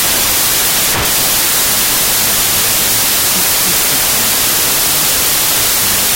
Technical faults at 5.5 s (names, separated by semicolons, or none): wrong sample width